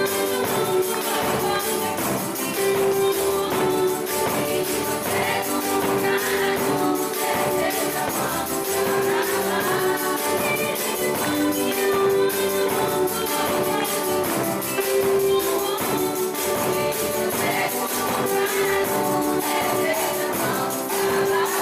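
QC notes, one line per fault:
19.75 s compressed frames skipped: a short smeared blip where the sound lurches forward, as if a sliver of time has been lost, with a soft, blurred join rather than a sharp click. Roughly 50 ms of audio never plays, which fits about two dropped frames of around 23 ms each. Those frames were missing or rejected as damaged by the decoder. Because adjacent frames overlap, the jump is softened into a smudge instead of a hard edge.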